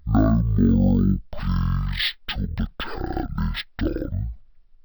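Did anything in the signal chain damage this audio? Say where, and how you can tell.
Yes. A stereo stream was read as mono at the file-reading or sample-format stage: interleaved left and right samples play back-to-back as one channel. The speech runs throughout at half speed, a full octave low, and the spectrogram shows a fainter mirror image in its upper half.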